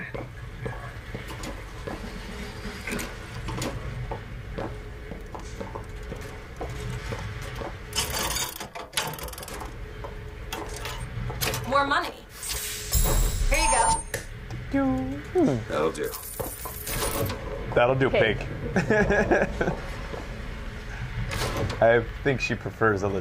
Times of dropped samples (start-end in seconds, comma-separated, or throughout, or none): 17.01